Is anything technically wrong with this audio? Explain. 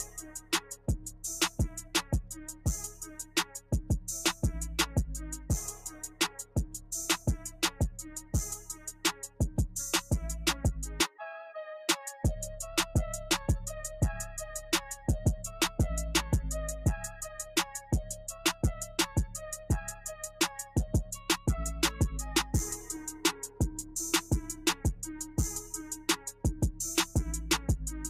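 Yes. Throughout, steady and held sound pumps and thins, swinging around 10 dB, because a noise suppressor meant for speech is applied to music or sounds and treats sustained tones as noise.

Sound cut by the noise suppressor appears at 0.04–4.43 s, 5.37–10.11 s, 17.47–21.47 s, 23.48–23.95 s, 24.53–24.85 s and 25.3–27.15 s. In these spans, sustained parts and decays sink by up to about 12 dB while sharp onsets survive, because the suppressor misjudges them as noise.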